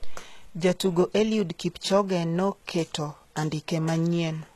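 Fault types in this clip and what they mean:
HE-AAC compression: the speech treble sounds bright yet gritty and lispy, likely from HE-AAC at a low bitrate, which fits about 16 kbps, rebuilding high bands by copying lower ones upward. On a spectrogram the upper band looks smeared and repeated, with nothing above 12.3 kHz.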